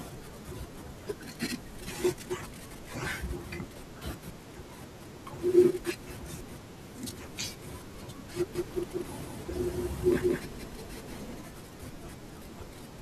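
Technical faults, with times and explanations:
8.55–11.41 s, doubled audio track: the speech is joined by a second full-band copy trailing roughly a fifth of a second behind at about the same level, likely a second capture path or a misaligned edit, with no decay or room colour, starting and stopping abruptly.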